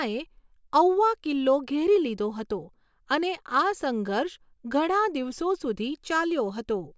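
Nothing goes wrong in this bit of speech: there's no glitch, gap or disturbance anywhere in it, so there's no fault to point to.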